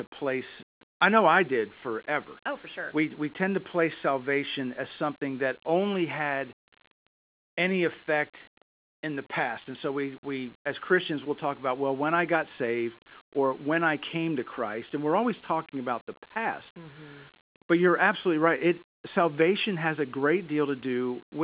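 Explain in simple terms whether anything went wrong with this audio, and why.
Nothing went wrong with this speech recording.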